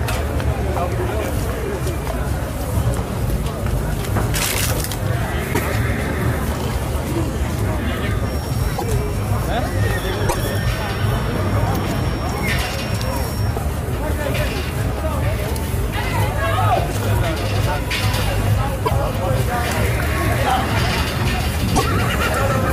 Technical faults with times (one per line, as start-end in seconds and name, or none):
5.53-5.60 broken MP3 bit reservoir
8.77-8.84 broken MP3 bit reservoir
10.28-10.35 broken MP3 bit reservoir
18.85-18.92 broken MP3 bit reservoir
21.75-21.82 broken MP3 bit reservoir